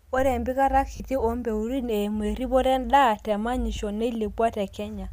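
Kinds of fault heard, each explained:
Lost LE Audio frames: the speech briefly turns into a hissy, smeared blur at 0.96 to 1.0 s, a 40 ms gap that fits four 10 ms frames, and again for a 10 ms blip at 3.76 s. When a frame over the Bluetooth link goes missing, the decoder of the likely LC3 stream fills the hole by reusing the last spectrum with random signs, so voiced tone becomes noise rather than a clean dropout.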